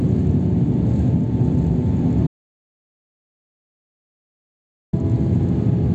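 At 2.27 s the sound cuts off abruptly and does not return until 4.93 s, an audio dropout to silence lasting about 2.66 s. The gap is silence with no room tone underneath, which points to the input likely being lost while the recorder kept writing silence. Whatever occurred in that stretch is missing. On a waveform it shows as a flat line, and on a spectrogram as a solid black band across all frequencies.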